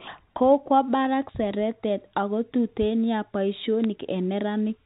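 At 3.84 s bit errors on a digital phone line hit the speech. A few bits in the G.711 mu-law stream were flipped, so a handful of individual samples took wrong values. Because the logarithmic coding gives sign and high bits large steps, a flip of one of those bits makes a sample jump far from the waveform, and that sounds as a sharp click. Unlike packet loss, no sound goes missing and there is no gap or smeared repeat. The speech around the errors stays continuous, band-limited below 4 kHz by the telephone coding.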